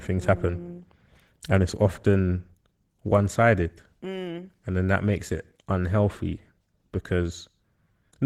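Opus voice compression runs throughout this speech, leaving it hoarse and faintly robotic from coarse excitation coding, which fits a low bitrate around 16 kbps in hybrid mode.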